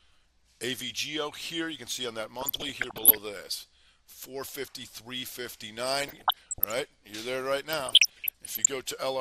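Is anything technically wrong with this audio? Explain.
Yes, there are two problems. Throughout, the sound is dull, with a gurgling, granular texture. This is likely MP2 compression at a low rate around 80 kbps, where sub-bands are starved of bits. The upper bands shut off and the rest are coarsely quantised. On a spectrogram the top end looks ragged and blocky, with bands blinking on and off.

DAB burbling occurs from 2.41 to 3.18 s, 6.01 to 6.72 s and 7.69 to 8.68 s. Bit errors of around 0.7 to 1 percent slip past error correction and corrupt samples and scale factors. Wrong samples put short blips of noise into single sub-bands, and wrong scale factors make sub-bands jump in level for up to a frame. A spectrogram shows scattered bright rectangular patches, and the waveform shows erratic spikes.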